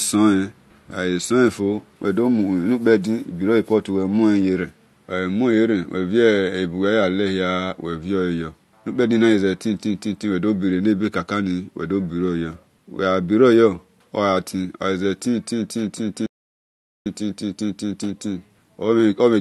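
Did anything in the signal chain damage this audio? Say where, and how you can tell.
Yes. A playback stall hits the speech at 16.26 s: the output drops to silence mid-flow for about 0.8 s, resuming at 17.06 s. This is at the playback stage, likely the player's buffer running dry or its output thread being blocked until it recovered.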